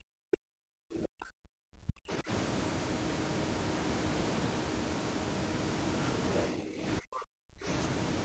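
The room sound drops out right at the start, from 0.00 to 0.08 s, falling by about 29 dB before returning. This is background gated by the echo canceller: while the far end played through the loudspeaker, the canceller clamped the microphone down and took the room ambience with it.

From 0.32 to 0.37 s a faint second voice slips in, about 35 dB below the talker. This is the other side's voice leaking through, likely loudspeaker echo that the canceller failed to subtract fully from the microphone signal.

Overlapping that, from 0.36 to 0.47 s, the talker's speech sinks sharply, by roughly 40 dB, for about a tenth of a second. This is speech suppressed in double talk, likely the canceller confusing the talker with the loudspeaker echo and attenuating both.

The background gates again from 0.75 to 1.59 s, dropping about 31 dB for close to a second, so the room goes dead before it comes back.

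From 1.87 to 2.02 s the speech dips again by roughly 40 dB for about 150 ms, a second double-talk suppression.

Near the end, the background dips more gently from 6.56 to 6.82 s, only about 11 dB, then gates hard from 7.01 to 7.65 s, by about 31 dB, as the canceller closes down the microphone once more.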